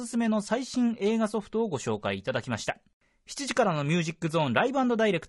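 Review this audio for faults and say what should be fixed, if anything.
Likely low-delay AAC compression throughout: short frames resolve pitch harmonics poorly at what sounds like about 32 kbps, making the speech rough and grainy. Give the encoder more bitrate, or use a standard-delay codec when low latency isn't required.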